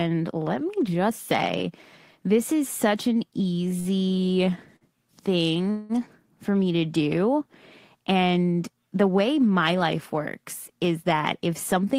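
At 3.79 s a sound is held a little too long, with a faint buzz or dip, for about 56 ms before the speech carries on unbroken. The same thing happens at 4.76 s, stretched by about 49 ms. These are short stalls from a late packet: each time a packet missed its slot, the jitter buffer ran dry, and the receiver extended the last sound until the packet turned up, so nothing is lost but the timing slips slightly.

From 5.71 s to 5.92 s the sound freezes for a longer stretch. The last sound is drawn out into a buzz or hiss lasting about 184 ms, with no drop to silence, and then the speech picks up exactly where it left off. This call audio freeze is likely the result of packets being held up in transit, which emptied the jitter buffer and forced the receiver to fill the gap until they arrived.

Near the end, from 11.12 s to 11.95 s, the speech sounds slightly hurried while its pitch stays the same, running about 6% fast. 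This is a jitter buffer speed-up. The buffer had built up more delay than its target, so the receiver cut out many tiny pitch-period slices in a row, roughly 70 ms in total, to bring the delay back down.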